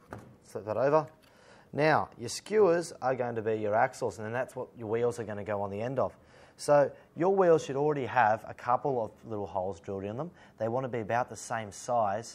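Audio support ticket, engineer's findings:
No faults found in this audio; nothing to report for the ticket.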